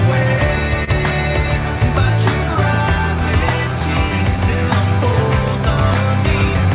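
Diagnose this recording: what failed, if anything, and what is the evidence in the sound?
Clock drift between sender and receiver is a network and buffer-stage fault. The sender's clock runs about 2% slow relative to the receiver's, so the jitter buffer keeps draining. Small timing irregularities recur across the clip at uneven intervals as the receiver compensates.

A short stall from a late packet occurs in the jitter buffer between 0.84 and 0.90 s. A packet arrived late and the buffer ran dry, so the receiver held the preceding sound for 27 ms, adding 27 ms of delay. Nothing is lost; the held sound just lingers with a slight buzz or dip.

Repeated timing corrections come from the receiver's buffer management between 1.79 and 6.67 s. To keep pace with the slow sender, it repeatedly stretches short pieces, playing at 98% speed and adding roughly a tenth of a second overall. These edits are unevenly spaced, over a band-limited signal with nothing above 4 kHz.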